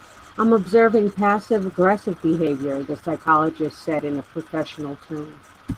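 From start to finish the speech carries Opus voice compression, plainly audible throughout. The voice sounds hoarse and faintly robotic because the low-band linear-prediction coder quantises the excitation coarsely, while a separate layer codes the band above 8 kHz. That fits a hybrid-mode stream near 16 kbps. Unlike a plain low-pass filter, the band isn't simply cut, and the roughness sits in the voice's texture itself.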